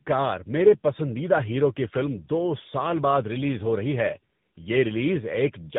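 Tandem speech coding runs through the whole clip. The speech seems decoded and recoded twice, likely GSM full rate then AMR-NB. Each coder worsens the last one's output. Nothing is heard above 3.8 kHz. It sounds rough, muffled and warbly.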